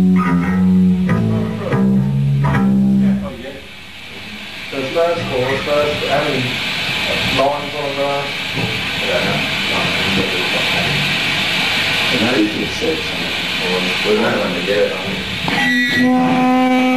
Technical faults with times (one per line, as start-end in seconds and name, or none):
1.19 compressed frames skipped
3.28 compressed frames skipped
12.17 compressed frames skipped